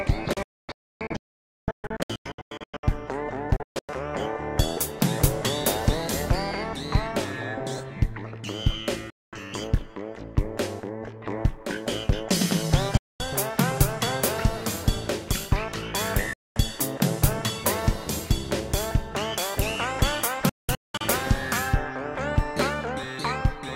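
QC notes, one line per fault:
0.33–2.84 s, 3.56–3.89 s, 9.10–9.33 s, 12.97–13.20 s, 16.33–16.56 s, 20.49–21.01 s: digital broadcast dropout. The sound mutes abruptly with a 3 ms fade as the receiver drops corrupt frames, which fits frames of about 32 ms. The first, second and last are scattered holes, longest 0.51 s. The middle three are single 0.22 s gaps. Sound sent during each gap is lost.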